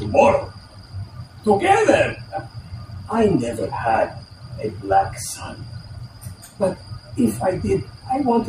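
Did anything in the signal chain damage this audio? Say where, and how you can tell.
No, nothing along the chain left an audible mark on this audio, so there is no stage to point to.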